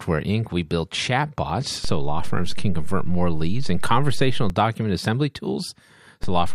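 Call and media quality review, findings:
DC step in the speech, twice. Low thump at 1.85 s, offset of about -17 dBFS holds, second thump as it returns at 4.50 s. Repeats at 6.24 s, held to end. Probable converter recalibration or offset input switched in. Speech continues unchanged beneath it.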